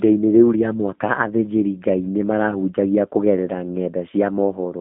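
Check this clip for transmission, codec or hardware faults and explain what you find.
One fault is present, running through the whole clip.

G.729 codec, throughout: the speech is rebuilt from a vocal tract filter, pitch predictor and sparse pulses, which fits 8 kbit/s G.729A. Nothing passes above 3.7 kHz, leaving a telephone band of about 150 Hz to 3.6 kHz, and the speech sounds plainly rough and synthetic.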